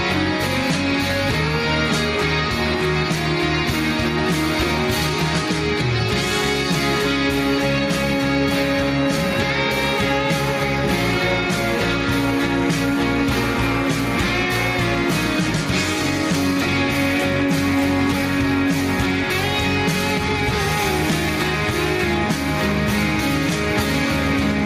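No technical faults are audible anywhere in the recording.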